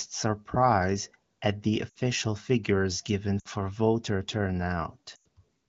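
At 1.89–1.95 s, 3.39–3.48 s and 5.15–5.27 s, lost AMR speech frames (about 60, 60 and 100 ms) are concealed by the decoder. It holds the last pitch and fades it out, unlike a hard dropout gap.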